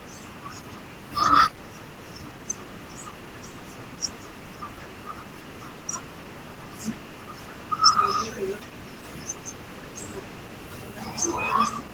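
Speech throughout, with Opus voice compression audible from start to finish. It points to a low bitrate near 16 kbps in hybrid mode, so the voice sounds hoarse and slightly robotic.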